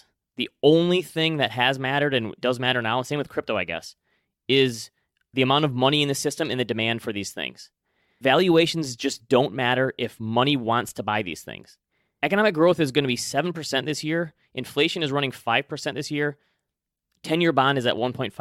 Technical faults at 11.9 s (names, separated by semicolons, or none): overlap between stream segments